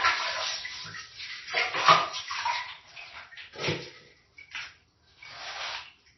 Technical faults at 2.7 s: MP3 compression

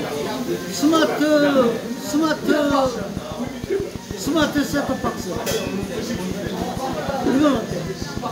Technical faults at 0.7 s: none

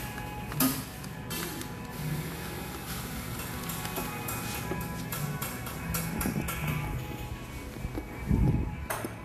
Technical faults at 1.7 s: Vorbis compression

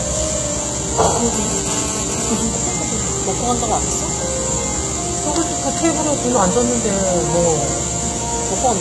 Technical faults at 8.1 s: HE-AAC compression

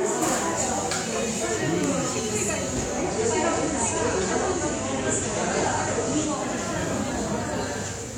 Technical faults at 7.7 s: none

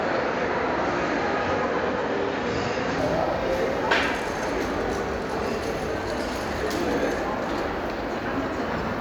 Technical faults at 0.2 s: input switched to a poorer device

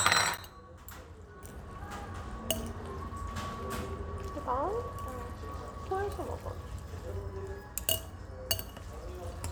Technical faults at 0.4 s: block of digital silence

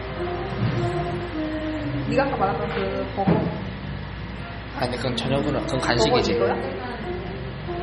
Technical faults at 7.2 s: MP3 compression

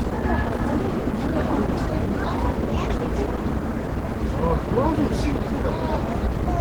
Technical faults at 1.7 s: Opus compression

